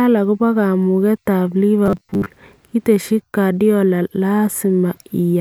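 Right after "akobo kamugetab", from 1.86 to 2.26 s, the speech turns into a rigid, metallic 100 Hz buzz: robotic sound from repeated short buffers, likely a 10 ms chunk looped while most incoming audio was skipped. Spectrograms show evenly spaced 100 Hz harmonic stripes; waveforms show identical repeating cycles.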